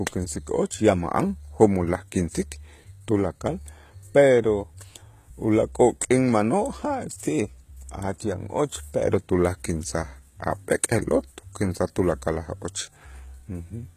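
HE-AAC compression runs through the whole clip. The damage is plainly audible, and it likely comes from HE-AAC v2 at a low bitrate around 20 kbps: upper frequencies are rebuilt from copied lower bands, which leaves the speech's treble synthetic and gritty, with nothing above 14.9 kHz.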